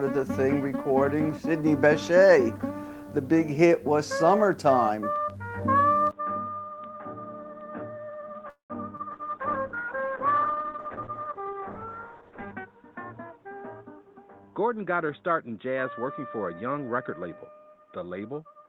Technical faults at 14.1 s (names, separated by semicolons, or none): input switched to a poorer device; jitter buffer speed-up